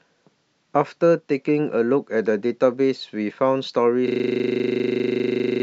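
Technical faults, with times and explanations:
4.08 s to the end (5.63 s): system hang loop. The speech abruptly stops progressing, and a single 40 ms fragment repeats exactly for the remaining 1.5 s, around forty times. The repetition rate of 25 Hz gives a rough, rattling buzz. This happens when the host or audio driver stalls while the playback hardware keeps reading the same ring buffer, which points to a buffer about 40 ms long.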